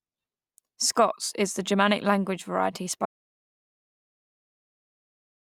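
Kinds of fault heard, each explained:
Audio dropout to silence: right after "language variety", at about 3.06 s, the speech stops mid-flow and the track drops to silence for the rest of the clip, about 2.4 s. There's no room tone and no hiss, so it isn't someone pausing. The input was likely lost, through something like a device coming loose or a stray mute, while the recorder kept writing silence. Anything that followed is simply gone.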